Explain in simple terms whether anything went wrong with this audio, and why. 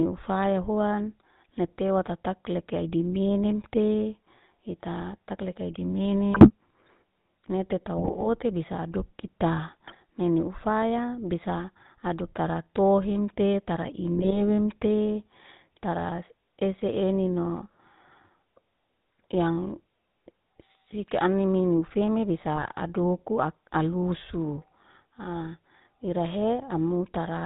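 GSM full-rate codec, throughout the whole clip: the speech has been squeezed through the old mobile-phone coding system. It rebuilds the voice from a simple model of the throat and mouth, driven by a rough, regularly spaced pulse train, and keeps nothing above 4 kHz. That is why the voice sounds plainly buzzy, gravelly and muffled from start to finish, like a call on an early mobile phone.

GSM bit errors, at 6.32–6.50 s, 7.97–8.27 s (just before "bisa adokita nene ufaya"), 9.87–9.95 s (between "bisa adokita" and "nene ufaya bisa adoktara"), 14.16–14.41 s (right after "ufaya bisa adoktara tohemte") and 22.56–22.73 s: the voice breaks into brief squawks, pops or gargling. Corrupted data reached the decoder, so the settings that shape the sound's tone, pitch and loudness came out wrong for those moments.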